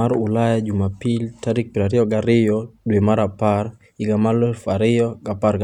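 Speech recording, with no audible technical faults anywhere.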